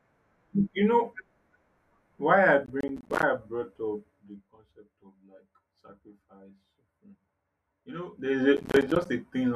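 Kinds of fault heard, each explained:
Processor overload crackle: from 2.66 to 3.23 s, between "why I" and "I brought", and again from 8.57 to 9.06 s. Around twenty processing deadlines are missed in quick succession, each leaving a short hard-edged silent gap that fits a buffer of about 10 ms, so the sound tears into gritty crackle.
Zipper noise: from 3.96 to 4.56 s, just after "I brought", the level drops by about 15 dB, and from 8.04 to 8.44 s it rises by about 15 dB. Each change arrives in unsmoothed steps, roughly 50 per second, and every step clicks, producing an audible zipping.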